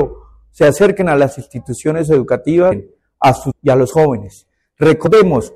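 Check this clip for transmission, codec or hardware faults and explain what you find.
Three short glitches from damaged data in a compressed stream, at 2.71 s, 3.50 to 3.52 s, and 5.06 to 5.08 s. Corrupted frames throw the decoder off sync, so each one comes out as a quick chirp or blip while it hunts for the next frame header.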